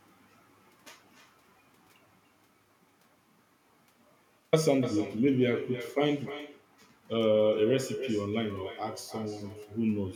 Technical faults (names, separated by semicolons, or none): echo with no canceller